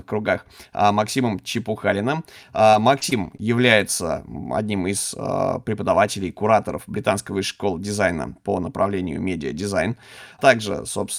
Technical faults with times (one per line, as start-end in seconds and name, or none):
2.63-3.80 repeated packet loss (robotic sound)